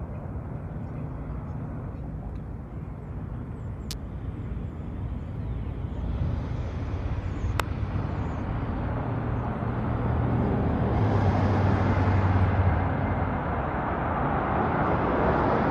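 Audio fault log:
3.91–3.93 s and 7.60 s, electrical switching spike: two sharp snaps sit on top of the sound, the first peaking around -10 dBFS, the second near -5 dBFS. The likely cause is a nearby switch or discharge arcing into the audio line. On a spectrogram each appears as a thin vertical broadband stripe, and on the waveform as a narrow spike.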